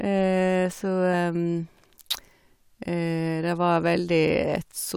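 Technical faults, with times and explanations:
1.13 s, damaged data in a compressed stream: a brief glitch cuts into the speech for roughly 10 ms. A short stretch of the encoded bitstream is corrupt at this point, so the decoder cannot parse the frame there correctly. It loses frame sync and scans ahead for the next valid frame header. Until it locks on again, the output is disrupted, and that disruption is the glitch.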